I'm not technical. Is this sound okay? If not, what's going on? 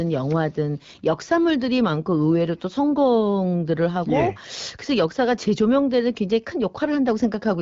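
Yes, it's fine: this is speech that has come through an HD Voice phone connection, and there's nothing here that needs fixing.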